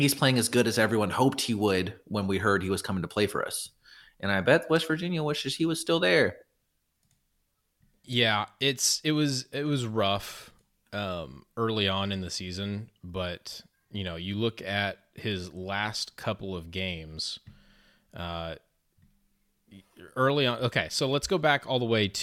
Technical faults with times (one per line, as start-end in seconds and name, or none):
6.40-6.42 lost LE Audio frames